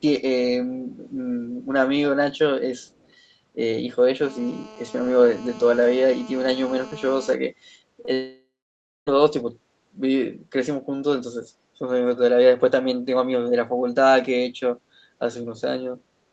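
From 2.85 to 3.12 s a faint, delayed copy of the speech trails behind the original by about 270 ms. It is very quiet, roughly 40 dB under the direct sound. This is an echo leak, likely from a far end on a loudspeaker whose echo canceller let part of the returned signal through. On a spectrogram it appears as a weak ghost of the preceding harmonic pattern, shifted right by about a quarter second. The waveform barely changes at that level.

Between 4.23 and 7.34 s a hard, raspy buzz runs under the speech. This is GSM phone buzz: a nearby 2G phone in an active call transmits in bursts about 217 times a second, and the audio circuitry rectifies those radio pulses into sound. It sits about 20 dB below the signal and stays nearly steady throughout. A spectrogram shows a comb of evenly spaced horizontal lines at 217 Hz and its many harmonics, reaching up to the 8 kHz ceiling set by the call codec's bandwidth, with no relation to the speech. 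The waveform shows a regular pulse train.

At 8.05 to 8.09 s there is a short concealed packet loss. About 20 ms of audio failed to reach the decoder in time, and the receiver bridged the gap by extending the previous sound for roughly 14 ms before blending back into real audio. It comes across as a brief smear or wobble. A spectrogram shows a tiny stretch where the harmonics continue unnaturally flat. The waveform shows a short repeated-looking segment.

Immediately after, from 8.13 to 9.09 s, comes a long network dropout, likely caused by a break in the incoming stream. About 0.94 s of audio never arrived. The receiver first extended the last sound as a fading buzz or hiss, then gave way to about 0.6 s of silence before speech resumed with that portion missing. A spectrogram shows smeared, decaying energy followed by an empty band, and the waveform tapers to a flat line.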